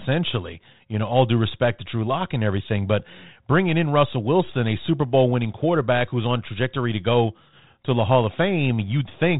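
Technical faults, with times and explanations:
No technical faults are present; the speech carries the expected telephone band limit of a 32 kbit/s G.726 path, with nothing above about 3.8 kHz and only light coding texture.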